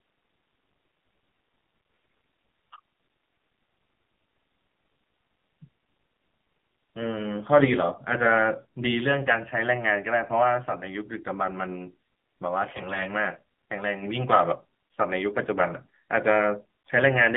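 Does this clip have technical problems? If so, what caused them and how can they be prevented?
Yes. The AMR narrowband mobile codec squeezes the speech into roughly 200 Hz to 3.5 kHz. It sounds buzzy and synthetic, which fits a low rate near 7.4 kbps. Prevent it by using a wideband codec or a higher bitrate.

AMR bit errors make the speech hoarse and gargly from 1.76 to 2.42 s and from 12.72 to 13.09 s. Flipped bits, a few percent of them, misplace the voice model's pulses. Prevent this with a stronger radio link or better error protection.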